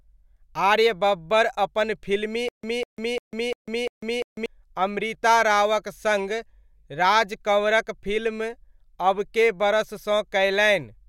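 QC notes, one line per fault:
2.49–4.46 s stutter with silent gaps: playback likely stalled, replaying the same 0.2 s fragment five times with 0.15 s of silence after each.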